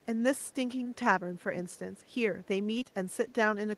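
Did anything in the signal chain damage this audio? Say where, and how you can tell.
Yes, two things. First, call processing: there's an echo leak, a very faint delayed copy of the speech, roughly 35 to 40 dB below it and trailing by about 511 ms. It shows up in scraps at 0.02–0.06, 0.38–0.52, 1.70–1.79, 1.97–2.14 and 2.44–2.48 s. That steady half-second lag is the giveaway. The likely cause is the far end running on a loudspeaker with an echo canceller that let some of its mic pickup slip back down the line.

Second, the network: short concealed packet loss. At 0.83–0.87 s, and again across two back-to-back gaps at 2.79–2.87 s, you get a brief smeared wobble where roughly 20 ms chunks never arrived in time. The decoder papered over each hole by extending the last bit of sound, voiced or noisy, then crossfading into real audio, so it's a short blur rather than a dropout.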